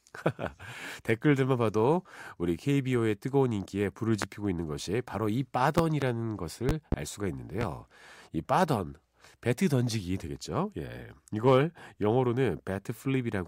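Loud pops hit the speech at 4.22 s, 5.78–6.05 s (a double), 6.69–6.96 s (another double) and 7.61 s, jumping well above the level, likely from electrical switching spikes.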